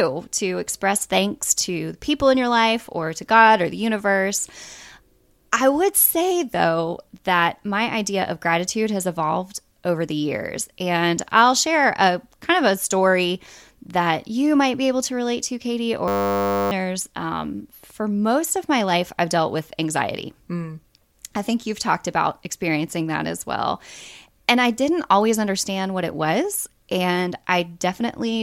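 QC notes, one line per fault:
16.08–16.71 s, system hang loop: a 10 ms slice of speech repeats some 60 times, producing a steady 100 Hz buzz while the driver stalls and the hardware recycles a very short ring buffer. Roughly 0.7 s of audio is lost.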